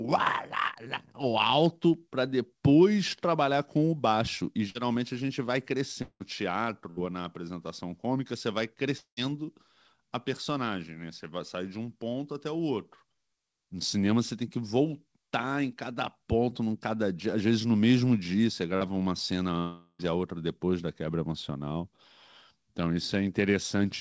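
Between 1.52 and 2.08 s come CD scratch ticks: five tiny clicks, the longest about a millisecond, spaced evenly at close to seven a second. A blemish on the disc wiped out more data than error correction could rebuild on each turn, so the player patched or muted the damaged samples. The steady rhythm and the very short ticks, with no smeared tail, set these apart from network losses.

At 4.70 to 4.77 s and again at 6.90 to 7.01 s there are bursts of packet loss. Several consecutive packets failed to arrive in time, so the receiver extended the last sound for about 49 ms and then 67 ms, letting it fade. The audio then resumes slightly further on, skipping several milliseconds. Each one is heard as a brief held buzz or hiss rather than a click, and is short enough that it never falls to silence.

Longer gaps occur at 6.02 to 6.22 s, 8.98 to 9.19 s and 19.59 to 20.01 s, and are most likely long network dropouts. 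In each, the last sound is stretched into a fading buzz or hiss and then drops into true silence, about 70 ms, 100 ms and 40 ms long respectively, before the audio returns with roughly 180 ms, 200 ms and 400 ms missing. That silent stretch is what separates these from the shorter bursts.

At 18.77 to 18.83 s there is short concealed packet loss. About 40 ms never reached the decoder, and the receiver filled the hole by continuing the preceding sound for roughly 39 ms before blending back into the real audio. It comes across as a quick smear or wobble, shorter than the bursts, with no fade and no silence.

Throughout, the call path's G.722 coding leaves nothing above 8 kHz.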